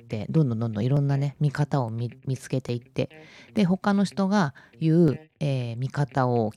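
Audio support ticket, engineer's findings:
Five sharp single clicks in the speech at 0.97, 1.89, 2.69, 3.57 and 5.08 s, each a thin vertical line top to bottom in the spectrogram. Likely dropped samples: under a millisecond of the stream goes missing each time, so the waveform steps straight to a later value. Far too short to lose any audible sound, just the discontinuity click. Irregular spacing, so worth checking the capture or transport buffer handling.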